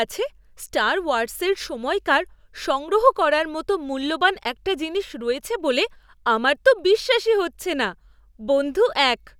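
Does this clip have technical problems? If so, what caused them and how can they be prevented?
Yes. A faint, steady rattle of clock slip clicks runs under the speech from 0.15 s to 9.35 s, with a tick roughly every 0.05 s. The likely cause is two unsynchronised device clocks differing by around 400 ppm, so a single sample is dropped or repeated each time the drift reaches one sample. Locking all devices to a shared word clock, or resampling with proper rate conversion between independent clock domains, prevents this.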